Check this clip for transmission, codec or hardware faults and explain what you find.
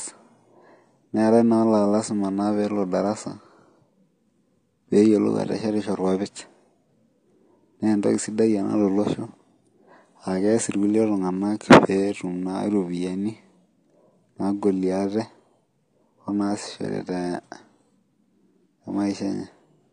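The speech carries one fault, and it runs through the whole clip: AAC compression damage. The sound is dull and plainly smeared, with a watery, warbling fizz on sustained vowels and sibilants, and nothing at all above about 9.9 kHz. The likely cause is an AAC-LC encode at a low bitrate, one that fits roughly 32 kbps. Starved of bits, the encoder drops the top band entirely and quantises the remaining frequency lines so coarsely that gaps open and shift from frame to frame.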